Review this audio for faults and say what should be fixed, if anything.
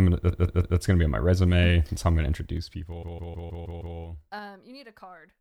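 Repeated frames occur twice. From 0.30 to 0.77 s, just before "gonna be on my", a 157 ms block plays three extra times. From 3.02 to 3.96 s the same-sized block repeats six extra times. Each repeat stutters. The block length fits a run of about six compressed frames being written or sent again. Together these add about 1.4 s to the speech. To prevent it, make sure the encoder and transport never resend or rewrite frames that were already delivered.

Zipper noise runs from 2.31 to 4.73 s, right after "how I'm gonna". The level falls by roughly 25 dB in 3 dB jumps, about five per second. Each jump lands without smoothing, so a ticking rides on the speech during the fade. To prevent it, ramp gain per sample or interpolate across each buffer instead of stepping it.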